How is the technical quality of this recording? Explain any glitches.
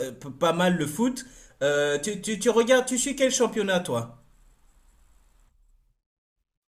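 No technical glitches turn up anywhere in the recording. The speech carries on steadily, with nothing audible interrupting it.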